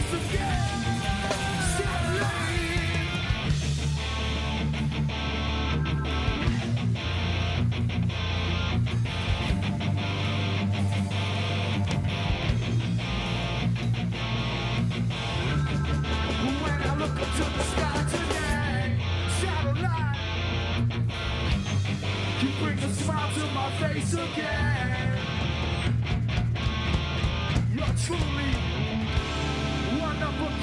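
No technical faults can be heard anywhere in the clip.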